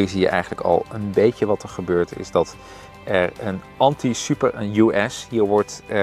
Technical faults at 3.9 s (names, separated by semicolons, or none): none